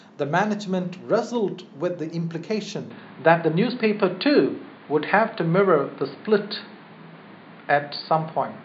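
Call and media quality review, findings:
Dull, boxy speech from 2.90 s to end. No gap at change. Nothing above 4.8 kHz. New noise floor around 35 dB down. Level shifts about 5 dB. Likely input switched to a poorer device with narrower band.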